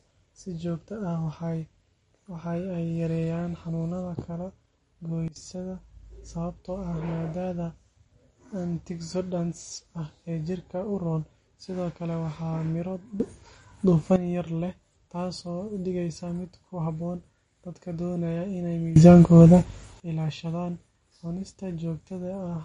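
Speech throughout, with plainly audible MP3 compression: nothing survives above 10.5 kHz, and the remaining treble sounds watery and swirly, which fits a low bitrate near 40 kbps. That swirl, not just dullness, separates it from a plain low-pass filter. Three sudden gain jumps occur, likely unramped digital level changes. At 5.28 to 5.36 s the level drops by about 17 dB. At 13.2 to 14.16 s, just before "yar leh", it rises by about 12 dB. At 18.96 to 20.0 s, after "doonaya inay", it rises by about 20 dB. The background noise steps with the speech each time, unlike a talker simply getting louder.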